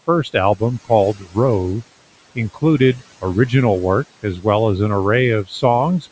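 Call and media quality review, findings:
Noise suppressor artifacts throughout: background pulled down about 18 dB, residue rising under speech as per-frame band gains chase the room noise, which sits about 20 dB below the voice.

Speech cut by the noise suppressor at 1.14–1.37 s, 4.23–4.45 s (after "original work", before "as an") and 5.44–5.63 s (after "as an"): brief dips of about 10–15 dB where the suppressor misreads soft speech as noise and ducks it; cut speech sounds swallowed.

Bandwidth tops out at 8 kHz from the call mic chain, expected.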